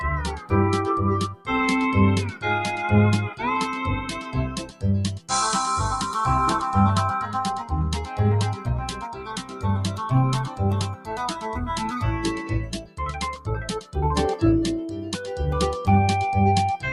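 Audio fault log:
throughout: noise suppressor applied to music or sounds. A suppressor built for speech stays active across the clip. It treats steady, sustained content as noise and pulls it down, while sharp onsets pass. The gain it applies swings by around 10 dB as it decides what counts as noise. Held sounds and decaying tails therefore sink and recover, so the audio pumps and thins rather than holding a steady level.
0.36–0.52 s, 1.28–1.49 s, 4.01–4.84 s, 8.54–9.64 s, 10.89–11.13 s, 12.67–12.99 s, 13.81–13.96 s: sound cut by the noise suppressor. At each of these points the suppressor mistakes the sound for noise and clamps it harder than the rest. The level drops by about 10 to 12 dB at the deepest. Most dips are brief, a few tenths of a second. The longest are near 4.0 s and 8.5 s, which last close to a second. Sustained parts dip or have their decay cut short.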